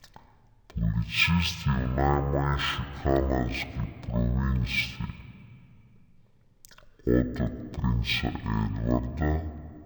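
From the first moment to the end, the speech is running at half speed and a full octave low, so everything sounds slow, heavy and drawn out. That's stereo read as mono: the left and right samples are interleaved in the file, but something treated them as one channel, playing each pair back to back. Every stretch of sound takes twice as long, which halves the speed and drops the pitch by 12 semitones.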